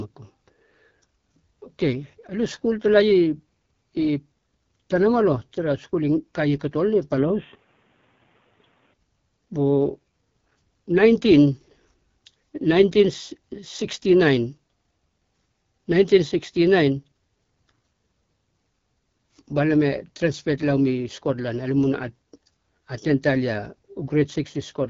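A speech recording passed through the AMR wideband (HD Voice) codec at 8.85 kbit/s throughout, giving a rough, raspy texture and nothing above 7.2 kHz. From 7.18 to 8.94 s the band narrows to 3.8 kHz with a faint new noise floor, most likely an input switched to a poorer device. There is no gap at the switch and no level jump.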